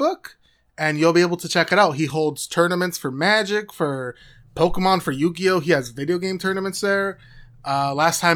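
No dropouts, clicks, distortion or level jumps turn up anywhere in the recording; nothing to flag.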